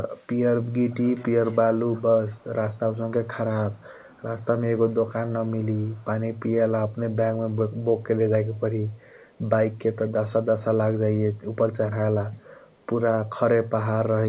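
A faint delayed copy of the speech, trailing it by 417 ms, appears at 0.14–0.27, 0.9–1.58, 1.95–3.27, 3.71–4.45, 4.89–4.95, 5.59–6.04, 8.91–9.38 and 12.71–12.76 s. This is echo leak, likely from a far-end loudspeaker whose echo canceller let residual pickup return. It is clearest at 0.9 s, about 20 dB below the speech, and elsewhere sits far lower, about 30 to 40 dB below.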